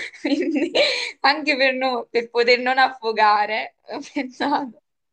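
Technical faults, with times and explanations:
Nothing in this bit of speech stands out as a technical fault, so there's nothing to list here.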